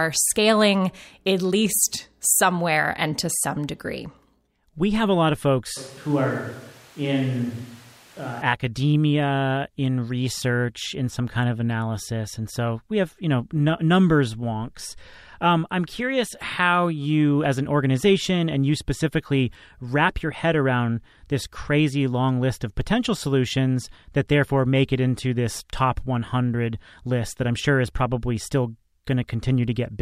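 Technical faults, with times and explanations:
5.77–8.42 s, switch to a distant microphone: right after "have a lot of", the speech suddenly turns roomy and hollow, loses bass, drops roughly 5 dB, and sits over room noise only about 25 dB down, until the close sound snaps back before "academia in research in". The close microphone's signal was likely lost, leaving a pickup further away. Added reverb or a bass-cut filter would change the tone but not raise the background noise, and neither would switch in and out this abruptly.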